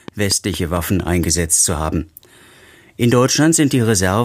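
From 0.08 to 1.24 s a steady ticking rides over the sound: a train of clicks, around seven alike pops at a regular 4.3 per second, peaking roughly 5 dB above the audio. The likely cause is interference from nearby equipment or a faulty connection or power supply injecting pulses.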